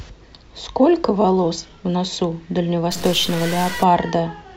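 The clip is speech with a stuck bit fault from 2.91 to 3.83 s. For just under a second, the sound turns harsh and buzzy, with a gritty distortion laid over it. The likely cause is a data bit held fixed, perhaps by a broken line or converter. Samples where that bit should differ jump by a fixed step of roughly -25 dBFS. The waveform itself decides which samples are hit, so the error follows the signal and rasps with it.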